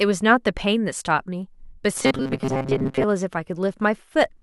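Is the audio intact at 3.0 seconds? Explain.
No. At 3.0 s the speech is still inside a stretch of robotic sound from repeated short buffers, running from 1.97 to 3.05 s. A rigid, metallic buzz at 133 Hz follows the words only loosely. That rate fits a segment of about 7.5 ms being replayed over and over, likely because new audio arrived too seldom and most of the real signal was skipped.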